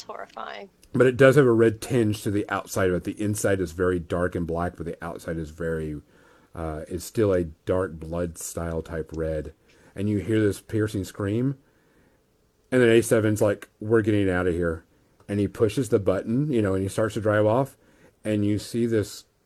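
Listening to the speech recording, nothing stood out as a technical problem.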